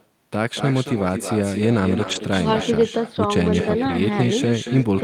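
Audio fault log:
Throughout, echo with no canceller: every phrase of the speech is followed roughly a fifth of a second later by a thinner copy about 9 dB quieter. The far end's loudspeaker feeds its microphone, and nothing at that end subtracts the returned signal.
2.03–2.17 s and 3.89–3.95 s, lost packets rebuilt from error correction: there is no gap, but both stretches turn rougher and noisier. The first rebuilds about 80 ms of audio, consistent with four 20 ms packets, and the second about 40 ms, consistent with two. The decoder substituted the low-bitrate copies carried in the following packets.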